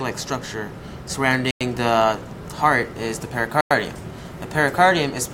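The audio was delivered in 2-second chunks, and a gap between chunks opens at each join, as if padding or a late start on the next piece left dead air. The first hole runs from 1.51 to 1.61 s and the second from 3.61 to 3.71 s, each 100 ms long and 2.1 seconds apart. Nothing is lost, but the sound is interrupted at each join, leaving two clean, regular dropouts.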